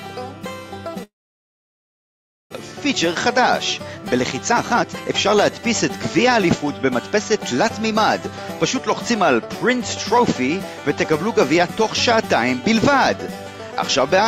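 From 1.03 s to 2.56 s the sound breaks off. The last moment smears into a brief fading buzz, then near-silence holds for about 1.4 s before the audio resumes, with roughly a second of material simply gone. This is a long network dropout: the likely cause is that packets stopped arriving, so the receiver filled the gap with concealment and then silence, and the delay afterwards jumps by about half a second.

Right after, the audio runs faster without any pitch change. From 2.72 s to 3.4 s it is only slightly quicker, at 104% speed. From 3.98 s to 5.6 s it sounds clearly hurried, at 120%. From 6.24 s to 7.94 s it is mildly rushed again, at 105%. This is jitter buffer speed-up. After the dropout the buffer held more audio than its target, so the receiver repeatedly cut out tiny pitch-period slices to bring the delay back down. That removed a few tens of milliseconds in the first stretch, about a third of a second in the second, and about a tenth of a second in the third.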